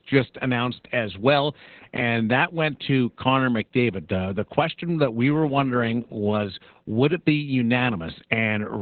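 From start to finish the speech carries heavy Opus voice compression, and the sound points to a very low rate of about 8 kbps with the SILK linear-prediction coder in narrowband mode. The band is cut to about 4 kHz, so the voice is muffled, hoarse and faintly robotic because the excitation is coded coarsely in 20 ms frames. On a spectrogram the energy stops flat around 4 kHz, with smeared, blocky harmonics below.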